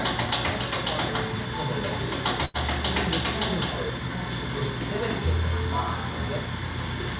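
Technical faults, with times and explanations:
2.45 to 2.57 s, burst of packet loss: A run of audio about 90 ms long never arrived in time to be played. The receiver covered the hole by extending the last sound it had and fading it down, for about 88 ms. That concealment is heard as a brief held or hissing tail that dims. The sound then picks up further along, with that stretch missing. The call path's 4 kHz ceiling fits a G.711 codec.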